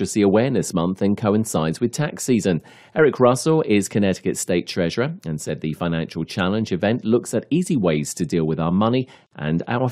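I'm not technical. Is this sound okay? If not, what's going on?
No, there's a gap at a join of encoded pieces. At about 9.27 s the speech briefly drops out for roughly 48 milliseconds, then picks up right where it left off. It likely happened because the audio was saved in separate chunks, probably about 10 seconds each, and then stuck together. Each chunk kept a sliver of silence at its edges, so the seam shows up as a tiny, slightly blurred hole.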